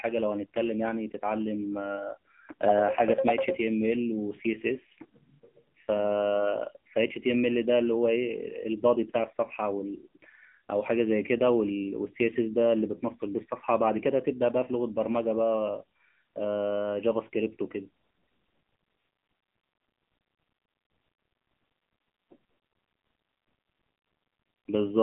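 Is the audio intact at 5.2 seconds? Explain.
No. At 5.2 seconds the speech is running through the AMR narrowband mobile codec, as it does for the whole clip. This codec rebuilds the voice from a vocal-tract model fed by a few pulses per 5 ms subframe. The band is telephone-like, roughly 150 Hz to 3.4 kHz, and nothing above 3.5 kHz survives. The damage is plainly audible as a buzzy, synthetic edge, which fits a low mode of about 7.4 kbps.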